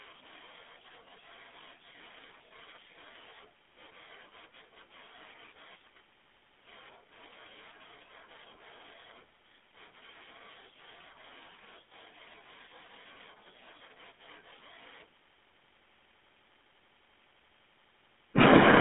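Speech passed through a GSM full-rate codec for the whole clip, consistent with 13 kbps, band-limited to 200 Hz to 3.5 kHz, leaving a plainly audible buzzy, gravelly roughness.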